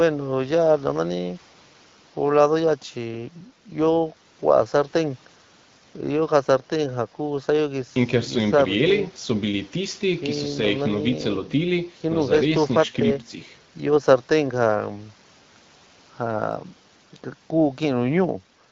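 Nothing stood out on listening to this speech, carried over the AMR wideband (HD Voice) codec at 12.65 kbit/s.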